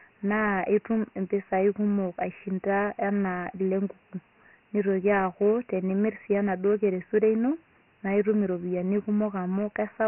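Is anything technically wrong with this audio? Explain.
Yes. Throughout the speech, the sound carries Dialogic VOX ADPCM damage, and it is heavy. This coder stores each sample as a 4-bit step relative to a prediction, so when speech changes faster than the step size can follow, a gritty, granular hiss rides along with the voice. Nothing is heard above about 3.1 kHz, which fits a 6,000-sample-per-second rate at 24 kbps. Plain telephone-band filtering would sound dull but clean, without that grain tracking the speech.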